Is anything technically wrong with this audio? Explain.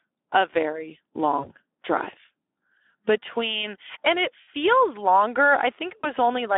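Yes, two faults are audible in this speech clip.

Speex codec damage, throughout: the low-bitrate CELP coder has too few bits to model the excitation, so the speech sounds hoarse and grainy, which fits a setting around 11 kbps. The band runs only from about 250 Hz to 3.5 kHz.

VoIP packet loss concealed by the speech codec, at 1.39 to 1.51 s, 4.41 to 4.48 s and 6.02 to 6.11 s: roughly 40, 60 and 20 ms of audio went missing. Each time the decoder repeated its last pitch and filter at falling gain. The result is a brief smeared stretch that fades, with the voice weak for a moment after it returns.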